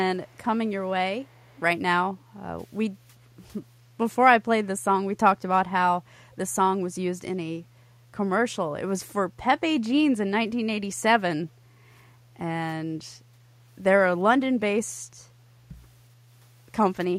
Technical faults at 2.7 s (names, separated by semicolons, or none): none